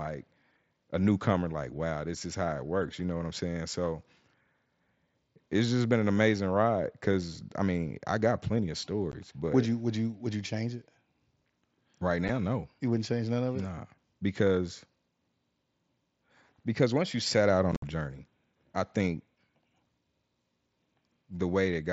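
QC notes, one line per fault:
9.12 s, 12.28 s, 17.72–17.83 s: unconcealed Bluetooth headset packet loss. Headset voice packets dropped and were replaced with silence or an idle pattern, leaving gaps of about 15 ms after "I got plenty of", about 7.5 ms at 12.28 s, and a 105 ms crackly patch of scattered gaps after "once you set out" that includes one 60 ms hole. Because nothing fills these gaps, each one has hard edges. On a waveform they show as flat dropouts, and on a spectrogram as blank vertical slots with broadband click lines at their edges, cut through the mSBC audio's band, which stops at 8 kHz.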